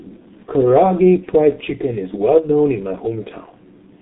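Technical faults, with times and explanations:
Throughout, G.723.1 codec: sound is confined to roughly 150 Hz to 3.7 kHz, nothing above 3.8 kHz, heavily muffled and hoarse, consistent with a 6.3 kbit/s telephony coder.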